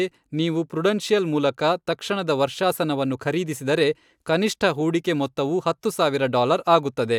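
Nothing here trips up the ear; the speech just rolls along from the first moment to the last without a single technical hiccup to point at.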